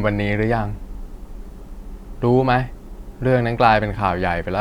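Listening through the speech, nothing stood out as a technical fault at any point.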